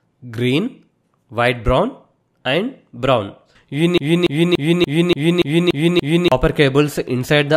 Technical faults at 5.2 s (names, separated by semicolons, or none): broken-record loop